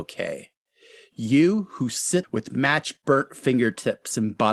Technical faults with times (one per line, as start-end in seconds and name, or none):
2.23-2.25 skip ahead